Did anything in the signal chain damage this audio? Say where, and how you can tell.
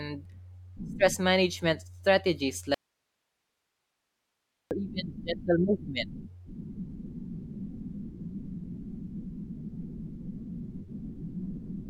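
Yes. The speech cuts out abruptly at 2.74 s and returns just as suddenly at 4.71 s. In the gap of nearly 2 s there is only faint hiss, roughly 50 dB below the speech, with no fade in or out. This is an audio dropout to a faint residue. The hiss shows that the path after the break stayed live while the source itself went missing, which likely points to an intermittent analogue connection or cable upstream of the converter.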